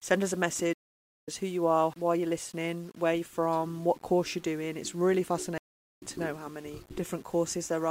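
From start to end, the speech carries grainy distortion that rises and falls with the sound. The likely cause is low bit depth without dither, consistent with rounding to 8 bits. The error tracks the signal, sitting around 30 dB below it, so quiet passages turn rough.

At 0.73 s a stream reconnect occurs. The connection drops and the audio goes silent for about 0.5 s, until 1.29 s. A fresh decoder then picks up mid-stream. The speech resumes roughly 0.3 s further on, so a short stretch is skipped.

A second stream reconnect follows at 5.58 s. This silence lasts about 0.41 s, ending at 6.02 s. Again the decoder restarts, and the speech resumes roughly 0.3 s later than where it broke off.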